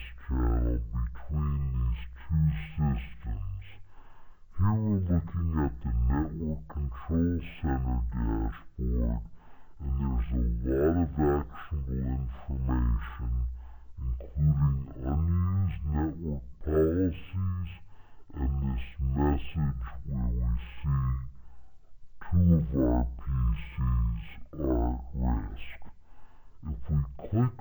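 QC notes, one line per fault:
Throughout: stereo read as mono. Interleaved left and right samples run one after another as a single channel, doubling the length of every cycle, so the sound plays at 0.5x speed and 12 semitones low. A spectrogram shows content squeezed downward, with a fainter mirrored copy in the upper half.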